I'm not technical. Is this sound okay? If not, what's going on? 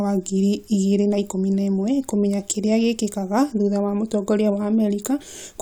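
Yes, the recording is fine; nothing in it calls for attention.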